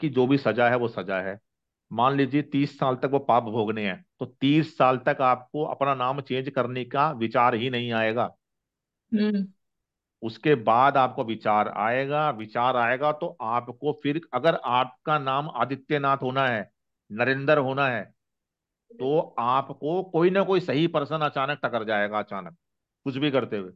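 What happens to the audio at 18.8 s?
Nothing goes wrong at 18.8 s; the audio plays through that moment intact, with no dropout, click, distortion or other fault.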